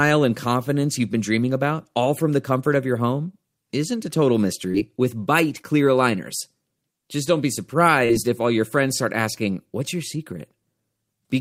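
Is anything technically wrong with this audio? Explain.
Yes, there are packet-loss problems in this speech, clustered in three spots.

Short concealed packet loss happens at 4.71–4.76 s, 5.62–5.65 s, and 8.05–8.11 s, the last one between "don't be" and "if all your friends". About 20 to 40 ms never arrived, so the decoder extended the preceding sound and blended back, leaving a quick smear or wobble.

A lost packet rebuilt from error correction shows up at 4.74–4.76 s (one packet), 5.54–5.60 s (two), and 8.09–8.15 s (two, just before "if all your friends"). The next packet carried a low-bitrate copy, so nothing drops out, but those 20–40 ms stretches sound rougher and noisier.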